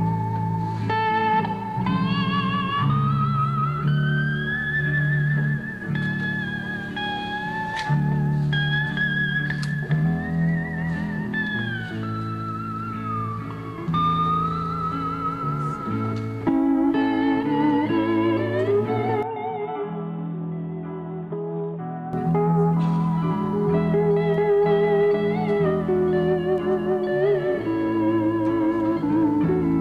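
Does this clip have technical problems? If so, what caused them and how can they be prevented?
Yes. From 19.23 to 22.13 s the sound abruptly turns dull, cut off above 3.8 kHz, drops about 10 dB, and gains new background noise roughly 30 dB down, with no gap at the switch. The likely cause is the input switched to a poorer device; a plain filter would not also change level and noise. Prevent it by locking the recording input and disabling automatic device or headset-profile switching.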